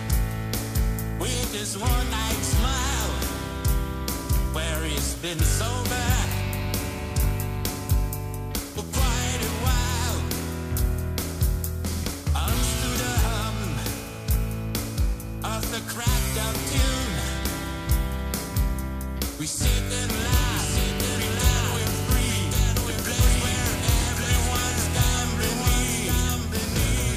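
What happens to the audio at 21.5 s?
A doubled audio track is in play: from 20.19 s to the end of the clip, the same audio is likely being mixed in twice, either captured again through a slower path or held as two out-of-step copies in an edit. At 21.5 s you hear the sound alongside a full-band repeat of itself arriving about a second later at roughly equal level, with no decay or room colour, and the copy cuts in abruptly at 20.19 s.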